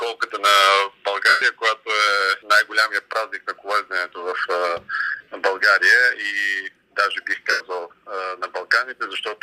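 Lost LE Audio frames at 1.29–1.42 s, 5.09–5.32 s (scattered, runs up to roughly 50 ms) and 7.50–7.61 s: the decoder repeats the last spectrum with scrambled phase, so tones blur into noisy smear rather than dropping to clean silence.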